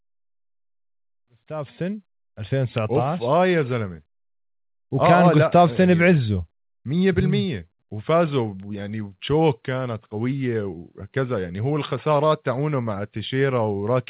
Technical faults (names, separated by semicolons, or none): none